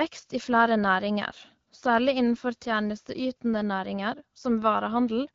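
Speech coded through the AMR wideband (HD Voice) codec at 12.65 kbit/s, which carries the voice band up to 6.4 kHz and fills the range up to 7 kHz with shaped noise, with only the light coding character expected at that rate and no technical faults present.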